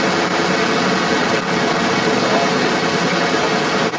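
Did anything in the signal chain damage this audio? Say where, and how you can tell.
Yes: in call processing, the echo canceller likely failed, so the other side's voice leaks through from start to end, roughly 10 dB louder than the local speech.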